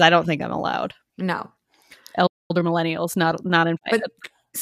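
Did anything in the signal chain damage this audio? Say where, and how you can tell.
Yes. The speech drops to silence from 2.26 to 2.51 s, about 0.23 s, then resumes. This is a playback stall, likely from a starved or blocked output buffer.

From 2.51 to 4.49 s the speech runs hurried at 1.1x, pitch unchanged. This is time-compressed catch-up, with playback splicing out small pieces to clear its backlog.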